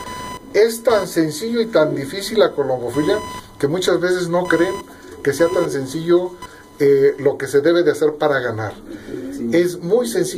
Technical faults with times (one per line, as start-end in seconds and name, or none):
0.00-7.27 computer activity noise